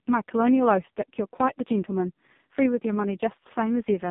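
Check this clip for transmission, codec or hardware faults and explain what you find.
One fault runs through the whole recording: the speech has passed through the AMR narrowband mobile codec. The band is confined to roughly 150 Hz to 3.7 kHz, with nothing above 3.7 kHz. Codec damage is heavy. Each 20 ms frame is rebuilt from a vocal-tract filter excited by a few sparse pulses, so the voice comes out buzzy and synthetic. That degree of coarseness points to the lowest AMR-NB mode, around 4.75 kbps.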